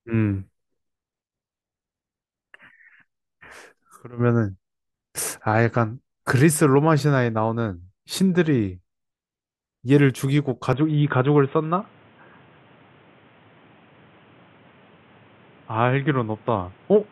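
At 10.73 s the speech abruptly narrows and stays that way to the end. Nothing above about 3.8 kHz remains, so the sound turns dull and boxy, the level shifts by roughly 5 dB, and a new background noise floor appears some 35 dB below the speech. There is no gap at the change. The likely cause is an input switched to a poorer device mid-recording, such as another microphone or a headset call profile.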